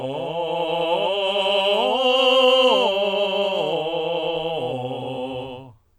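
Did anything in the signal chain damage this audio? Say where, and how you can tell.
Yes. This music carries a doubled audio track from start to finish: every attack is heard twice, a second copy landing roughly 150 ms behind at about the same level, with no decay or room colouring to mark it as an echo. The likely cause is a routing or edit stage, where a slower second capture path or two misaligned copies were summed. On a spectrogram each onset shows as a full-band pair of identical vertical edges, spaced evenly throughout.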